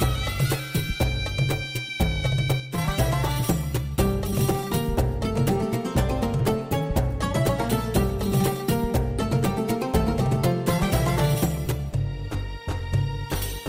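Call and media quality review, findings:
Sudden gain jump, 2.6–2.78 s. Level drops by about 6 dB in a single step, then returns. Sound and background noise fall together, with no ramp. Likely cause: a digital gain or bit-shift setting applied and reverted without smoothing. An AGC or compressor would slide over tens of milliseconds and leave the noise floor behind. This is instantaneous.

Repeated buffer, 11.67 s. Brief buzzy click, consistent with a very short slice replaying back-to-back with hard joins, roughly two extra passes. The repeat rate fits a 5 ms playback buffer. Probable component: output device or mixer starved of new audio, re-sending its last block. Distinguished from a dropout or packet-loss concealment by the absence of any gap or smeared fill. Essentially nothing goes missing, and the same fragment simply stutters.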